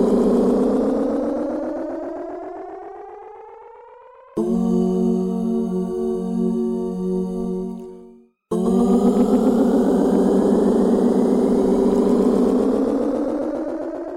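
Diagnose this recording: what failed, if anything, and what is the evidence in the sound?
Hard clipping from 8.77 to 9.74 s: the signal runs only about 1 dB past what a converter or sample-format stage can hold, so the highest peaks are sliced flat. Those squared tops add high harmonics, heard as brief crackle on the loudest moments.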